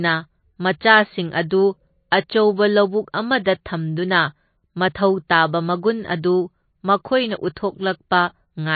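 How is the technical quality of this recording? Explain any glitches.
The recording is clearly degraded: dull and band-limited throughout, with one smeared attack.

Throughout, the speech sounds muffled and watery, with nothing above 4.5 kHz and a swirling texture on sibilants. The likely cause is MP3 compression at a bitrate low enough, around 27 kbps, that the encoder cuts the treble and drops weak spectral lines from frame to frame.

At 2.11 s, just before "ꯑꯆꯧꯕ ꯂꯧꯕꯨꯛ", a brief hiss of about 12 ms leads into an attack that sounds soft and blurred. This is pre-echo: the codec spreads quantisation noise meant for the loud onset across the whole block, so it fills the quiet moment before it.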